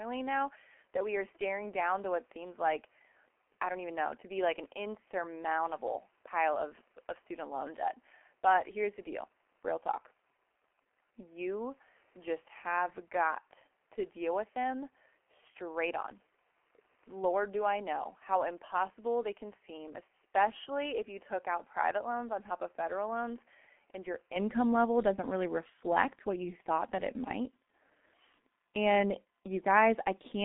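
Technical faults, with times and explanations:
Throughout, G.723.1 codec: The speech has been coded with G.723.1 at 6.3 kbit/s, heavily degraded, over a line passing roughly 200 Hz to 3.7 kHz, with nothing above 3.8 kHz. The codec models the voice in 30 ms frames and refreshes that model slowly, so fast changes are smeared. Consonants blur into one another, and the missing top end leaves the voice muffled and hoarse.
0.0 to 24.36 s, input switched to a poorer device: For the first 24.36 s the recording likely came through a lesser input, such as another microphone or a headset's call profile, before switching back just before "level doesn't really reflect". That device passes nothing above 3.3 kHz, sits about 5 dB quieter, and adds its own noise floor around 40 dB below the speech. The opening section therefore sounds duller, boxier and softer, then opens up at the switch with no gap.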